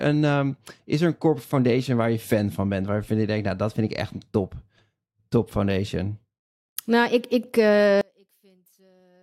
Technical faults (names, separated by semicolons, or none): one channel inverted